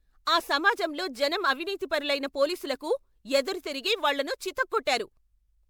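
Generation loss runs throughout the speech: a swirly, hollow smear with blurred attacks, more than a single encode would leave. It was likely caused by repeated MP3 re-encoding, about four passes at what fits 128 kbit/s. Each pass requantised on a shifted frame grid, compounding noise and spectral holes, with nothing above 20.9 kHz.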